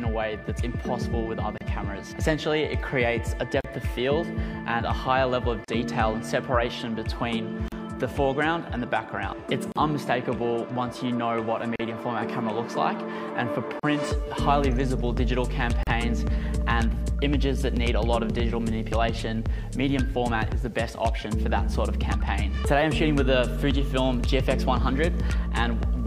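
Starting at 1.58 s, the sound drops out briefly, then again at 3.61, 5.64, 7.68, 9.72, 11.76, 13.80 and 15.83 s, roughly every 2 s. That's a gap at a join of encoded pieces: each chunk was encoded separately, and the start-up delay plus last-frame padding were never trimmed. The first hole is about 29 ms and the rest about 38 ms, with edges softened by the codec, and the sound resumes right where it left off.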